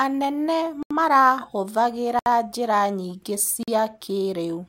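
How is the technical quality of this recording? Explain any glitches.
The speech has three glitches, all blocks of digital silence: at 0.83 s (about 78 ms), at 2.19 s (about 70 ms, just before "njĩra nyingĩ") and at 3.63 s (about 46 ms, right after "njĩra nyingĩ"). The output buffer likely wasn't filled in time and got zeroed; the last gap fits a 2048-sample buffer. Each one sounds like a short hole.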